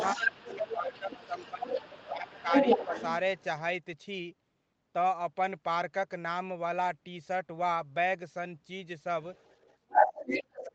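It's a speech recording from a call, and there's other side's voice leaking through from the start to 3.44 s at about the talker's own level, and again from 9.35 to 10.62 s a bit louder than the talker, likely because the echo canceller didn't fully strip the loudspeaker playback out of the mic. You also get speech suppressed in double talk. The talker drops noticeably from 0.15 to 2.48 s, dips slightly again at 2.86 to 2.95 s, and from 9.87 s to the end is pushed almost to nothing. That's likely the canceller turning everything down while both sides talk at once.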